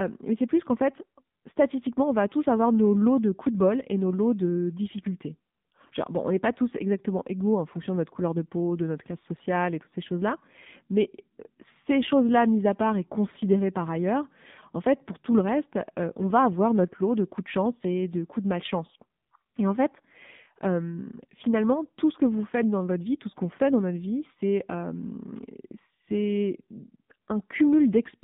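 From start to finish the speech carries the sound of the AMR narrowband mobile codec. The audible band runs only from about 150 Hz to 3.7 kHz, so sibilants lose their edge and the low body is thin. The coding damage is plainly audible, with a buzzy, synthetic quality. That fits a low AMR-NB mode near 7.4 kbps, where a few excitation pulses per subframe drive a vocal-tract model that cannot carry fine detail.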